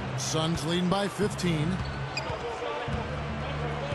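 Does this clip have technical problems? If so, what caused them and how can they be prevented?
No, the signal has no audible technical faults, so nothing needs to be fixed or prevented.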